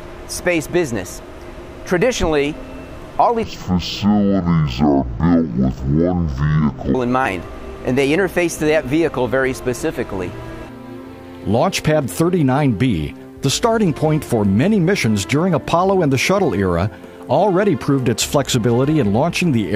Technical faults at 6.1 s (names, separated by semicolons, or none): stereo read as mono